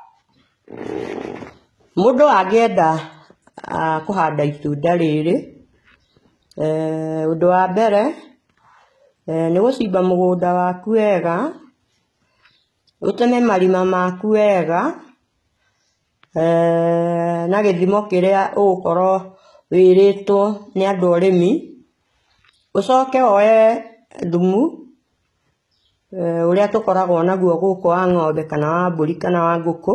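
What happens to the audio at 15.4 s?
At 15.4 s, as across the whole clip, heavy HE-AAC compression (likely at a rate around 16 kbps) rebuilds the treble from copied lower bands, so the speech turns gritty and lispy and nothing remains above 11.8 kHz.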